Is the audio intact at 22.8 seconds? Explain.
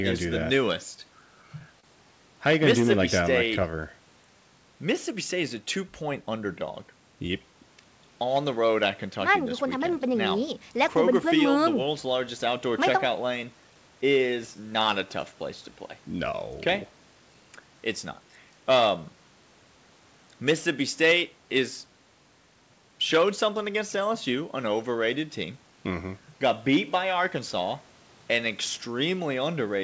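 Yes, at 22.8 seconds the speech is intact, with no dropout, glitch or other fault at that moment.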